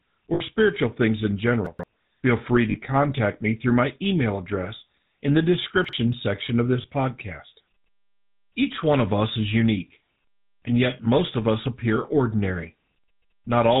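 A buzzy, gravelly roughness runs through the whole recording, with nothing above 4 kHz. That is the GSM full-rate codec at 13 kbps. It rebuilds the voice from a vocal-tract model driven by sparse, regularly spaced pulses, and that coarse excitation is plainly audible as grit.

From 0.34 to 0.41 s, just before "spiritual things in", the sound freezes into a short metallic ring for about 60 ms. This is lost GSM frames. The decoder filled the gap by repeating the last good frame's settings.

Between 1.66 and 1.84 s the flow jumbles. These are chunks out of order: a piece about 43 ms long plays late, after material that should follow it, leaving hard joins.

At 2.70–2.77 s, lost GSM frames return as a 40 ms rough hold.

From 5.85 to 5.93 s, between "email address in the" and "section of this podcast", a late chunk again garbles the sound.

At 6.82–6.85 s, right after "section of this", a brief metallic smear marks one more lost GSM frame, about 20 ms long.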